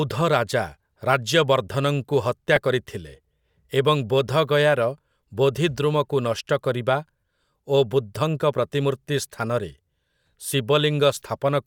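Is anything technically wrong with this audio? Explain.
Yes. Lost LE Audio frames at 2.56 s and 7.21 to 7.23 s: the LC3 decoder filled the gaps, about 10 ms and 20 ms, by repeating the last spectrum with random signs, which fits one and two dropped frames. The speech briefly turns into a noisy smear. On a spectrogram this shows as short smeared vertical bands, with little visible in the waveform.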